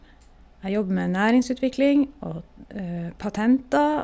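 No technical faults are audible.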